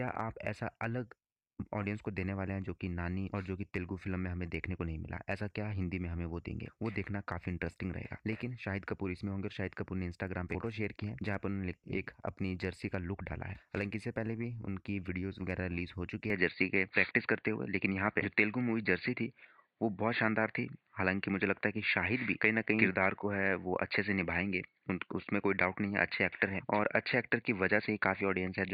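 From 16.3 s nothing passes above 4.6 kHz, and level and background noise shift with it, likely an input switched to a poorer device rather than a filter.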